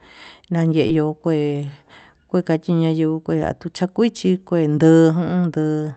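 A speech recording with one short concealed packet loss between 0.87 and 0.91 s. About 20 ms of audio never arrived at the decoder in time, and the receiver patched the gap with roughly 19 ms of synthesized signal, extending the preceding sound by repeating its pitch period where it was voiced or by shaped noise where it was not, before crossfading back to the real stream. The result is a brief smear or wobble at that point.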